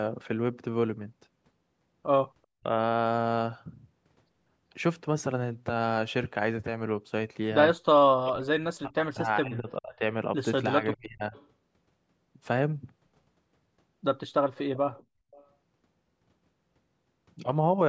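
Speech in which the talker's level drops sharply three times, at 2.6 to 2.66 s, 8.25 to 10.01 s and 10.79 to 11.34 s, falling by roughly 30 to 40 dB in patches. This is speech suppressed in double talk, likely caused by the far end talking at once and the echo canceller turning everything down. Faint, brief echo leak follows at 11.35 to 11.47 s, 14.55 to 14.77 s, 14.93 to 15.03 s and 15.31 to 15.47 s, a copy of the voice trailing by 390 ms and sitting about 25 to 30 dB beneath it. This points to a loudspeaker-side echo canceller that likely failed to remove everything its microphone picked up.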